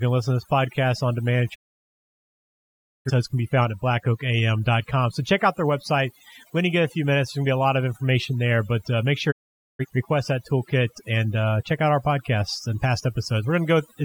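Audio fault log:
throughout: overdone noise removal. The noise reduction was pushed too hard on this speech, muting individual frequency bands whenever they sat close to its noise estimate, so pauses drop to near silence scattered with twinkling specks and quieter parts of the voice vanish.
1.54–3.11 s and 9.30–9.85 s: digital broadcast dropout. After "podcast on demand at" and "there but uh make", the receiver lost valid frames and muted, fading out over about 20 ms. Roughly 1.5 s and 0.47 s vanish, resuming at "can be found at" and "request that toolkit and".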